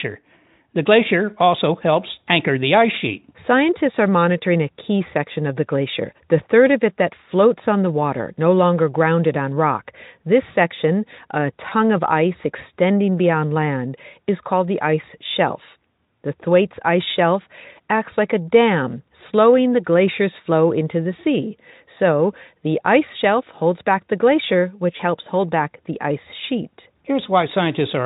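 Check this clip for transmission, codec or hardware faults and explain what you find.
Two brief dropouts point to VoIP packet loss concealed by the speech codec, at 11.69 to 11.73 s and at 24.97 to 25.03 s. Each fits a single lost 20 ms frame. The decoder extends the last pitch and filter state at falling gain, so the speech briefly turns into a short buzzy, smeared tone or a coloured noise that fades. It then stays weak or distorted until the frames rebuild. The Speex coding underneath shows no clear damage of its own.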